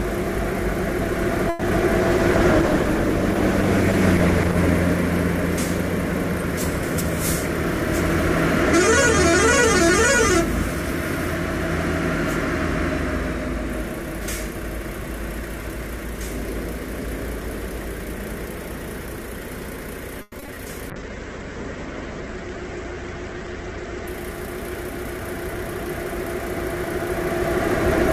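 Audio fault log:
1.49–1.63 s, call audio freeze: the sound stalls for about 120 ms, the last fragment drawn out as a fading buzz before playback resumes where it stopped. Nothing is lost, just a gap inserted, likely from delayed packets draining the jitter buffer.
1.98–4.63 s, call bitrate drop: the encoder falls from 96 to 13 kbps and holds the low rate for about 2.6 s. Coarser quantisation makes the audio rough and watery until the bandwidth estimate recovers and fuller coding returns.
14.53–16.28 s, jitter buffer speed-up: playback runs about 3% fast at unchanged pitch as the receiver trims short pitch-period slices, roughly 70 ms in total, to shed excess buffered delay.
20.22–20.58 s, repeated packet loss (robotic sound): four holes in quick succession, the longest 100 ms, are patched by extending the preceding sound, covering 44% of the span. About 60 ms is simply gone, leaving choppy sound with pieces missing.
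20.91–24.15 s, call bitrate drop: the rate falls from 96 to 9 kbps for about 3.2 s, and the coded bandwidth narrows from 20 kHz to 8 kHz. The top end disappears, so the audio turns muffled as well as coarse until recovery.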